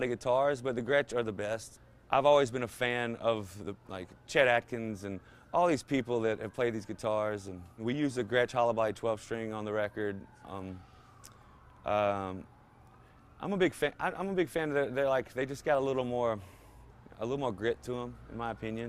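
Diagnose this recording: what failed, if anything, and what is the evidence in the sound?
Nothing stood out on listening that would point to a failure at any stage of the chain.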